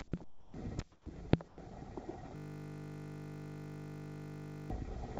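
At 0.24 s the sound gives way to a steady, even noise that lasts until 0.54 s, and the sound returns abruptly afterwards. This is sound dropped by the voice detector. The sender's detector likely classed the ongoing sound as background and stopped transmitting. For those 300 ms the receiver played generated comfort noise instead, and about 130 ms of actual sound is missing within the gap.

From 0.92 s to 1.06 s the background changes character. The real ambience, which sits about 27 dB below the loud parts, is replaced by featureless, evenly textured noise, and the level drops by about 3 dB. This is comfort noise in place of the background. During the pause the sender likely switched to discontinuous transmission, sending only occasional noise descriptions, and the receiver synthesised a rough match for those 140 ms.

At the end of that stretch, between 1.04 s and 1.06 s, the returning sound starts hard, without its soft beginning. 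This is an onset clipped by the voice detector. The detector was likely slow to register that sound had resumed, so the first 20 ms never went out and comfort noise covered them instead.

At 1.48 s there is a second instance of sound dropped by the voice detector. For 100 ms, up to 1.58 s, steady noise replaces the signal, and about 80 ms of real sound is lost. The likely cause is the detector again mistaking active sound for background.

From 2.36 s to 4.7 s the audio collapses into a steady buzz. This is a system hang loop. The host or driver stalled while the audio hardware kept replaying the same 20 ms ring buffer, well over a hundred times in succession. Because the loop repeats 50 times per second, it is heard as a 50 Hz buzz rather than as a stutter. Roughly two seconds of the original audio are gone. Throughout the clip, nothing is present above 8 kHz, which fits the bandwidth of a wideband call codec.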